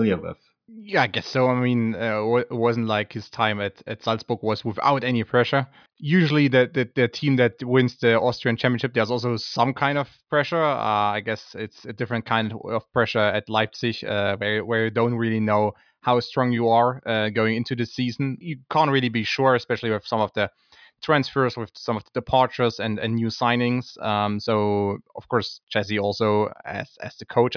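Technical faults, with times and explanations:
No technical faults are audible anywhere in this speech recording.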